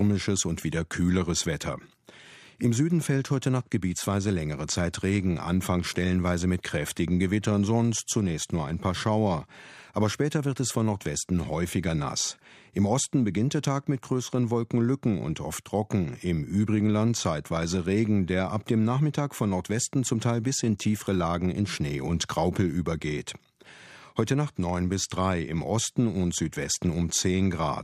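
No technical faults are audible anywhere in this speech recording.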